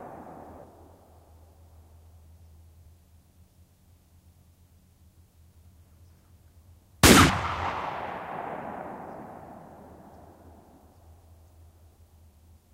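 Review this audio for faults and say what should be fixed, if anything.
Compressed frames skipped at 0.64 s, 2.86 s and 7.3 s: at each point the audio leaps forward without a gap. The first two jumps lose around 0.7 s of material, consistent with about seven frames of 85.3 ms, and the third loses roughly 0.15 s, consistent with a couple of frames.

To prevent this, re-encode from an intact source and verify the file's frame integrity after transfer.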